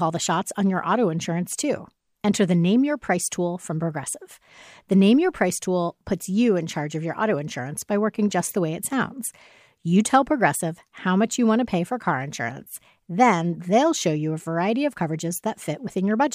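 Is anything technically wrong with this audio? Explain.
No, nothing is technically wrong.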